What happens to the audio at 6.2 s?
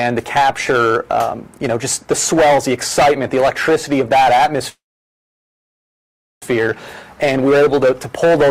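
At 6.2 s the audio is inside a call audio freeze that runs from 4.69 s to 6.43 s. The last sound before it carries on as a brief, fading buzz or hiss and then gives way to about 1.6 s of silence. When the audio resumes, it continues from exactly where it stopped, with nothing lost. Everything afterwards is pushed about 1.7 s later. The likely cause is packets held up in transit, leaving the jitter buffer empty until they arrived.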